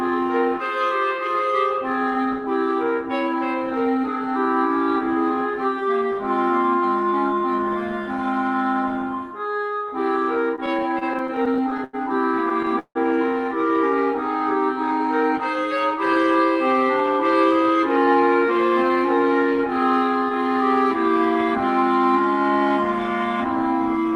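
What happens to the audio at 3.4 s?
Nothing goes wrong at 3.4 s: the audio passes through intact, with only the ordinary band-limited character of the call codec it travels through.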